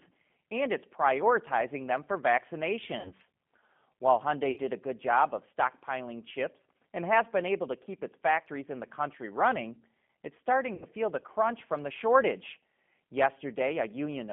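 The whole clip carries G.729 codec damage, and it is plainly audible. The speech sits in a line band of 150 Hz to 3.4 kHz. At 8 kbit/s the voice is rebuilt from a vocal tract filter, a pitch predictor and a few pulses per frame, so it sounds rough and synthetic.

VoIP packet loss concealed by the speech codec follows at 3.00 to 3.12 s, where about 50 ms of audio is missing. Another gap of 60 ms falls at 4.51 to 4.60 s, just before "a good job of". The last falls at 10.75 to 10.85 s, between "the country running it's" and "feel the crunch from", with 70 ms missing. These gaps point to runs of five, six and seven 10 ms frames. In each gap the decoder repeats its last pitch and filter at falling gain. The sound stretches into a buzzy tone or a coloured noise that fades.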